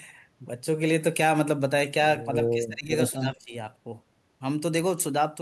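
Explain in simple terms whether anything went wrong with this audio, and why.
Something went wrong from about 2.55 to 3.54 seconds. Both sides likely talked at once, and the echo canceller couldn't tell this talker from the other side's echo, so it turned everything down. This is speech suppressed in double talk: the voice drops sharply for about one second.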